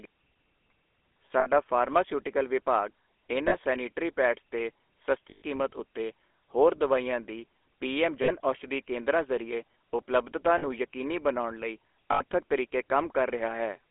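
Speech squeezed through the GSM full-rate codec the whole way, with a buzzy, gravelly edge from its pulse-driven vocal model and a narrow phone band of about 300 Hz to 3.4 kHz. There are also lost GSM frames at 1.4, 3.48, 5.3, 8.22, 10.58 and 12.12 s, each lasting 40 to 120 ms. In each gap the last good frame is repeated, so the sound is held as a short metallic ring.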